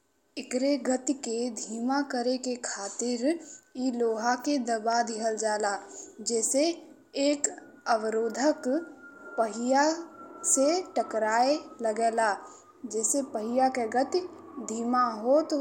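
Nothing technically wrong can be heard in this speech recording, and the signal holds steady throughout.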